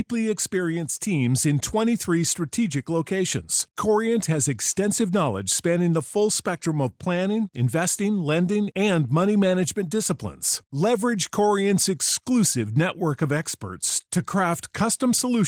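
Nothing stood out on listening to this speech clip.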